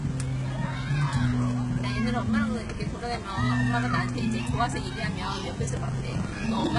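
Right from the start there's a DECT cordless phone buzz sitting under everything: a thin, steady 100 Hz buzz with a comb of harmonics above it. A DECT handset or base somewhere nearby fires a radio burst every 10 ms, and the audio circuitry rectifies those bursts into sound. It's fairly quiet, roughly 35 dB under the main sound, but it never lets up, so you'll catch it in any pause.

The top end has that artificial sheen all the way through. Nothing makes it past 11 kHz, and the treble that is there sounds gritty and metallic, with upper harmonics that don't quite sit right against the lower ones. That's likely HE-AAC compression at a very low rate, something like 12 kbps, where the codec keeps only the lower band and rebuilds the highs by copying lower bands upward under a coarse envelope. The damage here is heavy.

Then from 5.76 to 6.67 s there's processor overload crackle, a burst of rough tearing riding on top of the sound. 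The processor couldn't finish its small buffers on time, so dozens of deadlines went by in a row, each one filled with a hard-edged scrap of old audio. The texture fits buffers of around 10 ms. Once the load eases, the crackle stops, just before the clip ends.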